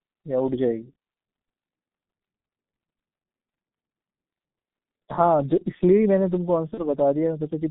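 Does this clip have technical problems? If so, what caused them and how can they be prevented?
Yes. Throughout the speech the sound is muffled and hoarse, confined to a band of roughly 150 Hz to 3.6 kHz, with smeared consonants and a grainy, heavily damaged texture. This is the G.723.1 codec, an early internet-telephony coder that models the voice in 30 ms frames at a very low rate, here consistent with its 6.3 kbit/s mode, so fine detail and high frequencies are discarded. To prevent it, carry the call over a wideband codec such as G.722 or Opus.

From 6.74 to 6.83 s the speech is briefly stretched into a sound that fades and then recovers unevenly. This is VoIP packet loss concealed by the speech codec. The gap points to a single lost 30 ms frame, which the decoder filled by extending its last pitch and filter settings at falling gain. Because each frame depends on the previous one, the distortion lingers after audio resumes, stretching the disturbance to about 85 ms. 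To prevent it, reduce network loss or add forward error correction and a jitter buffer.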